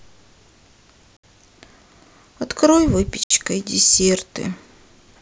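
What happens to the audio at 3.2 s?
A gap between chunks opens from 3.24 to 3.30 s: the audio was split into 2-second pieces, and about 69 ms of silence sits at this join. Nothing is lost, but the sound stops abruptly, leaving a short hole.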